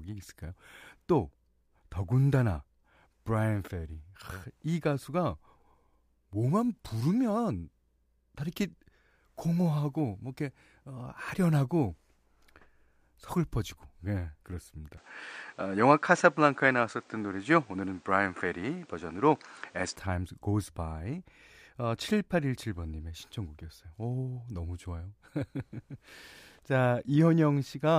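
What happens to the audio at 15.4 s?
From 14.97 to 19.96 s the speech turns duller as the input likely switched to a poorer device. The spectrogram shows nothing above 9.5 kHz, a new faint noise floor, and an abrupt level step.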